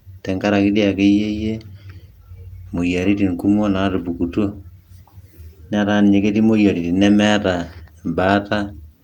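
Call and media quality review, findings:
No faults found in this speech recording.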